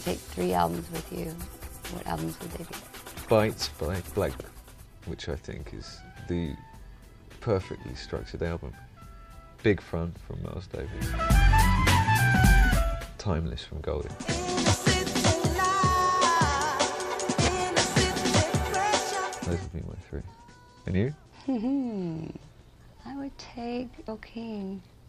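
Two short glitches come from damaged data in the compressed stream. The first, from 4.40 to 4.43 s, is a quick glitch about 30 ms long. The second is a tiny one right at 24.08 s, near the very end. In both spots some bytes in the encoded file have gone bad, so the decoder misreads those frames and loses sync for a moment before it locks back onto the next good frame header.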